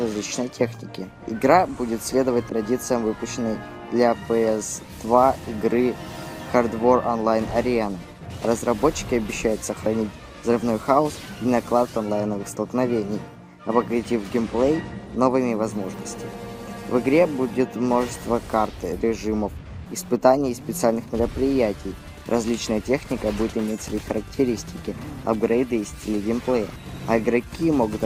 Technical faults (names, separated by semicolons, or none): corrupt frame decoded